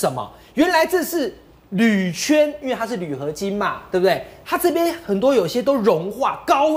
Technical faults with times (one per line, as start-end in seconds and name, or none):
none